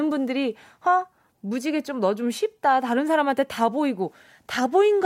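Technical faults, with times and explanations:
No technical faults are audible anywhere in this speech recording.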